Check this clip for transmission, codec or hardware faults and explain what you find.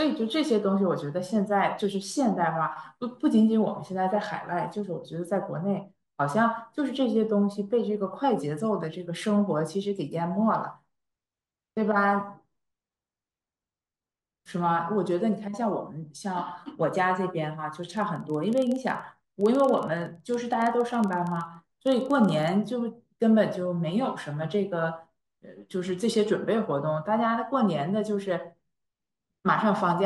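One fault is present. Filter restarted on every block, 17.83 to 22.55 s: state resets each block, causing a 21.5 Hz buzz tracking speech level, consistent with 2048-sample blocks.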